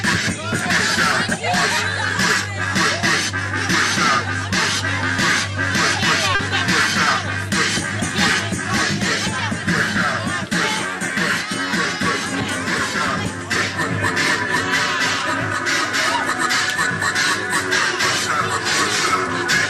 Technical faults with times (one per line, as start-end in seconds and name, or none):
6.35-6.41 short concealed packet loss